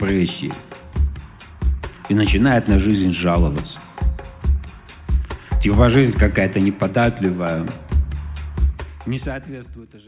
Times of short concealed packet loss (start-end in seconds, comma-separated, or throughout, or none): none